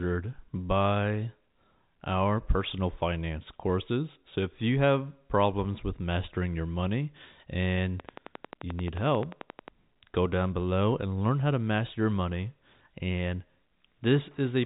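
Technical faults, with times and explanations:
8.00 to 9.69 s, train of clicks: right after "mastering your money and", a regular ticking starts up at about 11.3 clicks a second, roughly twenty in all, and stops just before "go down below and". The clicks all have much the same shape and poke out well above the speech, peaking at about 10 dB over it. That steady, mechanical pacing points to a likely cause in interference from nearby equipment or a faulty connection or power supply.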